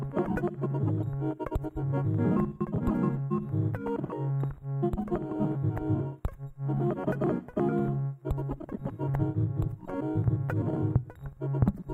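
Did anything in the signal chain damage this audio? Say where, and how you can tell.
No, no signal-chain damage heard.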